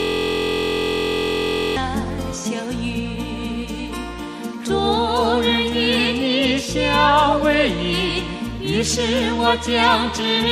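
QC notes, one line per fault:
0.00–1.76 s, system hang loop: already under way at the start, a 23.2 ms fragment repeats 75 times, giving a steady 43 Hz buzz, which fits a 1024-sample buffer.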